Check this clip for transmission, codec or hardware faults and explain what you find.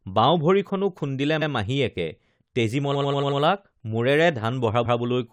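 Three stutters from repeated frames. At 1.41 to 1.50 s a 92.9 ms block plays once more. At 2.94 to 3.40 s the same length of block plays five extra times, adding 464.4 ms. At 4.84 to 4.98 s a 139.3 ms block repeats once. Short runs of compressed frames were written or sent more than once, so the decoder played the same slice of speech again. Each repeat is heard as a hiccup, and the clip runs longer by the repeated time.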